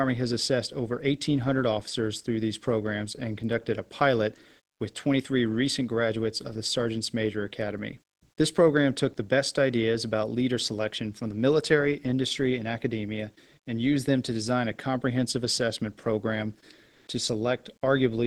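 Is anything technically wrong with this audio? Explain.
Yes. From 16.91 to 17.07 s, just after "a comprehensive assessment program", a 160 ms stretch of comfort noise replaces the background. The real room tone, about 52 dB below the loudest parts, gives way to a steady, featureless hiss about 8 dB different in level, then returns. The likely cause is discontinuous transmission in an Opus-type call codec: the sender halts during silence and the receiver synthesises shaped noise, audible against a coded background whose top near 12 kHz points to a roughly 20 kbps call path.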